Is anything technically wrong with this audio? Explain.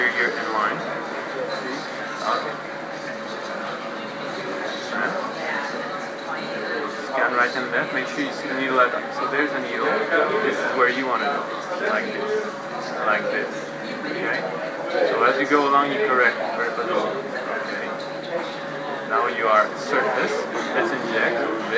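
No, nothing is technically wrong; the audio has been through a call path whose band ends at 8 kHz, consistent with a wideband codec such as G.722, and that limit is simply how the line carries it.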